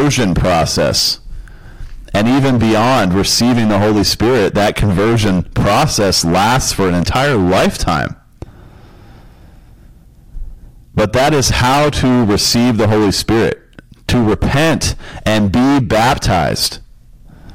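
Speech with hard clipping throughout. It is driven about 17 dB past full scale, so roughly a third of samples are cut flat, giving harsh fuzz on every loud sound.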